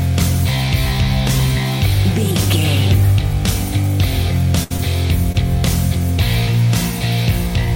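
At 4.63 to 4.72 s a held buzz or fading hiss stands in for the sound, then jumps ahead: a burst of packet loss, where about 60 ms never arrived and the receiver stretched the last sound across the gap. Brief smears follow at 4.76 to 4.80 s and 5.32 to 5.36 s, each short concealed packet loss of roughly 20 ms patched from the preceding sound.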